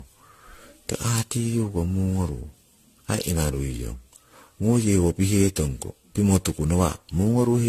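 All the way through, the speech has a swirly, hollow, smeared quality with blurred attacks and nothing above 14.2 kHz, likely generation loss from around ten passes through AAC-LC at 64 kbit/s.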